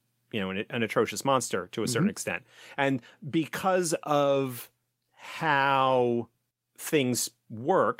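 From 4.25 to 7.45 s there is a call bitrate drop. The speech turns coarse, watery and muffled, which fits Opus falling from 64 to about 20 kbps.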